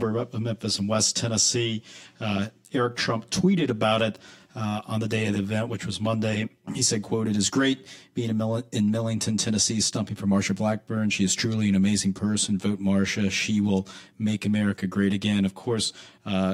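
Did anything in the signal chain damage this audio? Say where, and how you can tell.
Yes: channel delay (comb filtering) throughout at the buffer stage. One channel lags about 10 ms before the mono sum, cutting notches from around 50 Hz every 100 Hz, making the speech hollow.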